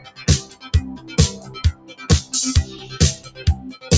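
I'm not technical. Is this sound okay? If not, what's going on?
No. A noise suppressor applied to music or sounds runs through the whole clip. It's a filter built for phone calls that treats steady sound as background noise and turns it down, so the level keeps swelling and sinking in a noticeable pumping way.

The sound is cut by the noise suppressor in four places: 0.00 to 0.18 s, 0.45 to 0.66 s, 1.73 to 1.94 s and 3.23 to 3.39 s. In each spot the filter mistook the sound for noise, so it briefly drops and thins out before recovering.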